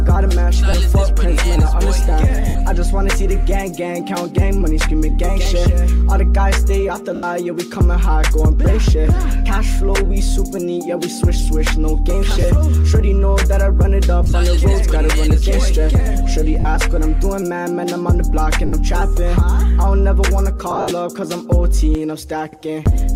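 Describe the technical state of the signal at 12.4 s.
At 12.41 s the signal shows lost LE Audio frames, a dropout running to 12.44 s, about 30 ms in total, which fits three consecutive 10 ms frames missing from the Bluetooth LE Audio stream. With no data to decode, the LC3 decoder conceals the gap by repeating the last good spectrum with randomised signs. Any tonal content through that span loses its pitch and smears briefly into noise before normal decoding resumes.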